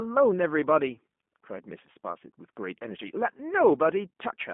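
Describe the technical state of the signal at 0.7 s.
At 0.7 s, as across the whole clip, the speech has passed through a G.729 codec, which fits an 8 kbit/s voice link. It resynthesises each frame from a filter model and sparse pulses, confining the band to 200 Hz to 3.5 kHz and leaving a plainly rough, synthetic edge.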